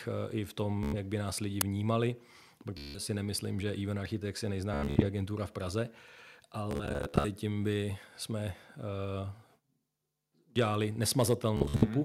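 Speech, marred by Bluetooth stutter at 0.83–0.96, 2.78–2.99, 4.74–5.05, 6.71–7.27 and 11.57–11.86 s. Late packets make short slices repeat as a buzzy stutter. The sound then jumps ahead. An uninitialised buffer bursts at 1.61 s, after "by nás lidi". It is a loud digital crack, fitting a 256-sample buffer played unwritten. At 11.19–11.21 s, peaks go about 1 dB over full scale, and a small share of samples is flattened, likely microphone overload.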